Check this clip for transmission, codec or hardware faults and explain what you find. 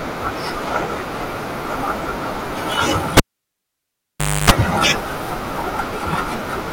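A hardware fault occurs once. From 3.17 to 4.50 s, a cable is pulled and plugged in: a pop, 1.28 s of near silence (a flat line with spikes either side), including 0.28 s of 50 Hz mains buzz, seen as stacked harmonics, as the tip touches, and a second pop.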